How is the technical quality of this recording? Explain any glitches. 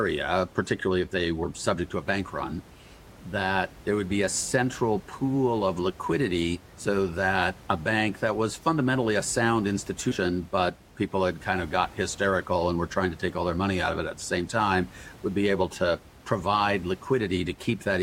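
There are two short dropouts where compressed frames were skipped, against a room noise bed sitting about 23 dB under the speech.

The first is at 1.43 s and the second runs from 10.11 to 10.16 s. Each time, a handful of compressed frames never get decoded, either missing from the file or rejected as damaged, so the speech lurches forward by roughly a tenth of a second, which fits a codec using 20 ms frames.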